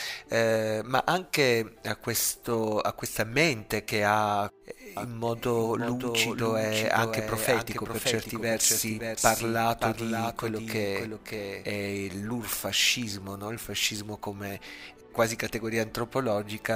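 From 4.97 s to 11.65 s the audio is heard twice: a full-band copy trails about half a second behind, roughly 5 dB quieter, with no decay or room colour, and it cuts in and out abruptly. This doubled audio track likely comes from a second, slower capture path mixed in.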